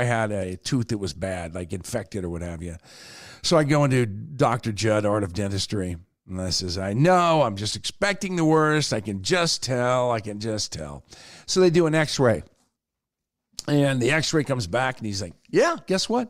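At 1.13 to 1.15 s a corrupt frame decoded fault is heard as a short, sharp blip in the speech. Flipped bits in a few consecutive compressed frames were passed to the decoder, which played them anyway. The misread gains and codes put energy at the wrong frequencies, producing a squeaky, noise-like burst that peaks at around -30 dBFS. It lasts only as long as the damaged frames.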